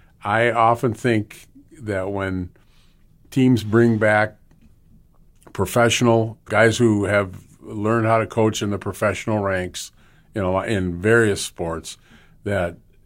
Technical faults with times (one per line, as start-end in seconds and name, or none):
none